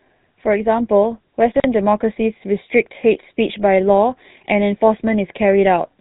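Throughout, the speech carries plainly audible GSM full-rate codec damage. The sound is buzzy and gravelly, and nothing comes through above 4 kHz. The vocal tract is modelled and fed sparse regular pulses, which fits a 13 kbps GSM full-rate stream.

From 1.52 to 1.64 s, there are chunks out of order. A 40 ms piece plays late, after the pieces meant to follow it, which points to a delay of about two chunks. The moment sounds jumbled, with three hard joins.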